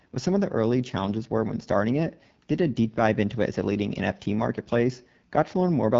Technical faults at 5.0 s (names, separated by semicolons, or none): AMR wideband (HD Voice) codec